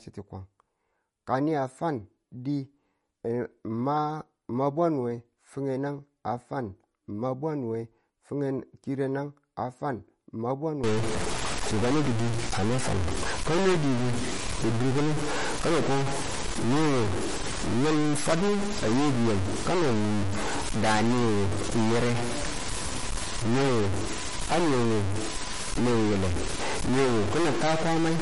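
Speech, with plainly audible MP3 compression throughout: nothing is present above 11.1 kHz, and the remaining band has a watery, swirling texture as weak frequency lines drop in and out between frames, which points to a low bitrate of roughly 44 kbps as the likely cause. From 10.84 s to the end, a distortion rides on the signal and the pauses fill with noise. This is consistent with a stuck bit, likely a single data bit held at a fixed value that offsets about half of the samples.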